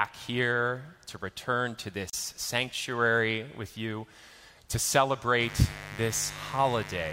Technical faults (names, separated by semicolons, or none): gap at a join of encoded pieces; mains buzz